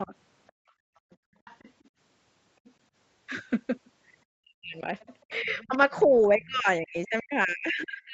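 A speech recording with faint remnants of the other side's voice leaking through at 0.0–0.52, 1.11–1.88, 2.65–2.71 and 4.67–6.46 s, roughly 30 to 35 dB below the talker, likely left by incomplete echo cancellation. On a spectrogram these show as thin, ghostly harmonic traces under the main voice. Speech suppressed in double talk dips the talker briefly, by roughly 15 dB, at 0.05–0.12 s, then pushes it far down, by roughly 40 dB, from 4.43 s to the end, likely as both sides speak together. The waveform envelope visibly collapses there, and the spectrogram thins and darkens. Between 0.52 and 1.38 s the room background is gated by the echo canceller, dropping by about 33 dB. This leaves a near-silent gap in the background before the room tone returns.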